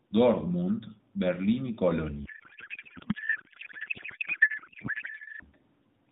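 A codec payload misread runs from 2.26 s to 5.45 s. Octet-aligned AMR frames are being parsed as bandwidth-efficient, so every field lands in the wrong place. The narrowband speech gives way to garbled noise and warble that barely tracks it.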